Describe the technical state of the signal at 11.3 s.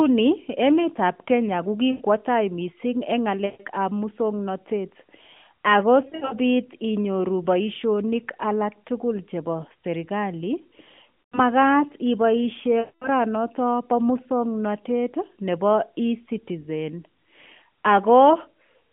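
At 11.3 s the speech smears into a drawn-out hold that sags in level and fades toward silence, then comes back briefly weak or rough. These are lost AMR speech frames, spanning 11.22 to 11.40 s. Radio errors corrupted a run of frames, so the decoder kept repeating the last good pitch and vocal-tract settings at falling gain. The missing stretch is 100 ms, which fits five 20 ms frames, carried over the narrowband AMR link.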